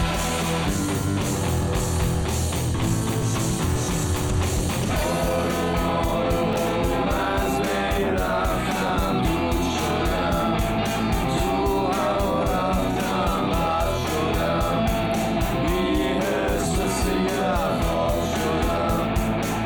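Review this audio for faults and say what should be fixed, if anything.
Chunks out of order at 6.53–6.56 s and 8.87–8.89 s: a 10 ms chunk plays two chunks late, then one chunk late, giving a brief jumbled moment with hard joins. Unlike a dropout, no audio is missing or silenced; it is only reordered. Enforce sequence numbering and reorder chunks in the buffer before writing or playback.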